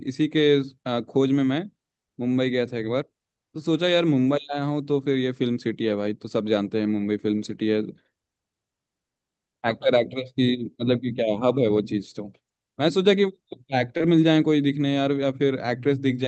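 A speech recording carried over a call path whose top end stops near 8 kHz, consistent with a wideband call codec such as Opus. At 13.97 to 14.02 s there is short concealed packet loss: a few hundredths of a second never arrived, and the receiver stretched the preceding sound to cover it before blending back. Unlike a plain dropout, there is no silence, only a brief smear or wobble where a consonant may vanish.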